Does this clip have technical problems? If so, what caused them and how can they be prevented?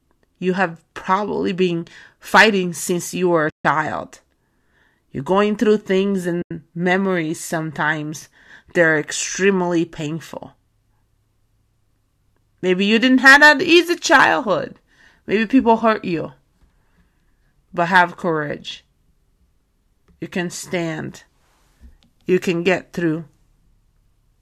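Yes. There are two short dropouts from AAC frame loss with muting. The first runs from 3.50 to 3.65 s, right after "since you were a", and lasts 150 ms. The second runs from 6.42 to 6.51 s, between "going through things" and "memories sometimes they're extremely", and lasts 90 ms. Whole coded frames never reached the decoder, so it zeroed their spectrum. The overlapping windows fade the sound out and back in, so each gap is a soft-edged hole. The steps fit frames of about 10 ms. The audio also has the light coding damage of low-delay AAC, likely AAC-ELD, but that part is working as intended. To prevent the dropouts, protect the stream against packet loss with forward error correction, retransmission or a larger jitter buffer, and use a decoder with real concealment instead of plain muting.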